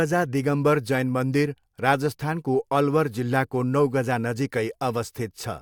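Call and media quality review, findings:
No audible faults found in this speech recording; nothing to flag for follow-up.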